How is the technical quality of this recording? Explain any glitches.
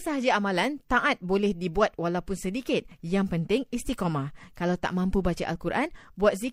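No technical faults are audible.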